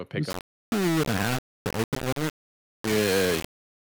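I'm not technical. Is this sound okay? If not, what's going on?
No. Low bit depth without dither runs from 0.3 s to the end: the speech sounds grainy and gritty throughout, with the grit almost as loud as the voice. It is likely stored in only about 3 bits, each moment rounded to a few coarse steps.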